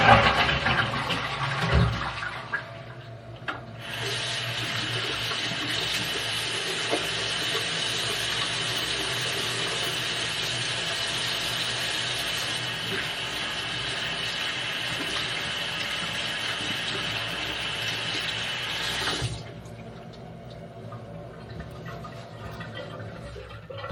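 Throughout the clip runs a DECT cordless phone buzz, about 40 dB below the sound. A nearby handset or base transmits a radio burst every 10 ms, which the audio circuitry rectifies into a thin, raspy 100 Hz buzz rich in harmonics. Mains hum, by contrast, sounds smoother and rounder.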